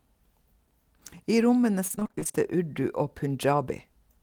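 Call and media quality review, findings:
Repeated packet loss (robotic sound), 1.87–2.36 s in speech. Choppy stutter. Jitter buffer/PLC on the receive path. Roughly a dozen short holes, longest 26 ms, each patched by extending the preceding audio, so about half the span is concealment. Distinct from a single dropout, because the gaps recur rapidly. Distinct from low-bitrate codec smearing, because the artefact is recurring chopping confined to this half-second stretch.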